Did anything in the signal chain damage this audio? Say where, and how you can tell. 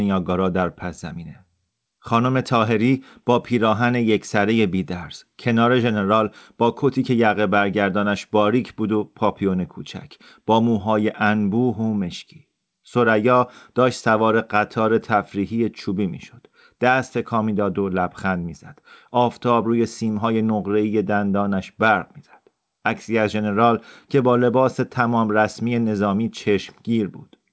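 No, nothing in the chain damaged this speech: the absence of content above 8 kHz is just the normal bandwidth of the call's microphone processing and a wideband codec consistent with G.722.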